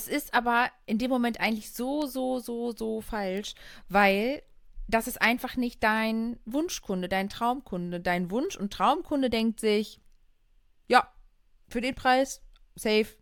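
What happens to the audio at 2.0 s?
At 2.02 s the speech carries a bit error spike: a flipped bit knocks a few consecutive samples off by a power of two before they snap back, giving one broadband tick peaking at about -22 dBFS. Unlike a dropout click, no audio goes missing around it.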